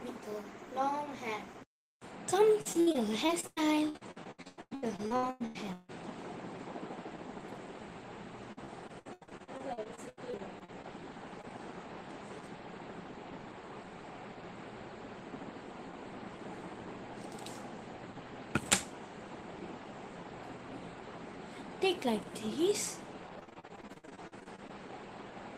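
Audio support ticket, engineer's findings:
Repeated packet loss (robotic sound), 2.61–5.90 s, 8.52–10.86 s and 23.39–24.71 s. Choppy texture with pieces missing. Receive-side jitter buffer/decoder concealment: lost or late packets patched by extending the last audio, with the next gap close behind. About 39%, 27% and 36% of each stretch concealed. Longest holes 155 ms, 79 ms and 55 ms. The first stretch is the worst.

Short concealed packet loss, 11.42–11.45 s. Brief smear or wobble, roughly 20 ms of audio missing. Decoder concealment bridged the hole by continuing the preceding sound, then crossfaded back into received audio. Isolated event, shortly after the second choppy stretch. Same network/receive path as above.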